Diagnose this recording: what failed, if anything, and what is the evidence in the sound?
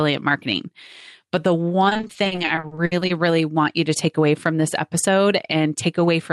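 The failure is at the network stage: repeated packet loss (robotic sound) from 1.89 s to 3.11 s. Over that stretch the speech turns choppy, with many short holes, the longest about 60 ms. The receiver covers each hole by extending the last sound, so about 440 ms, roughly a third of the span, is synthetic fill. On a spectrogram, harmonics smear into flat, repeated slices between breaks. The waveform shows clipped-off segments and looped-looking stretches.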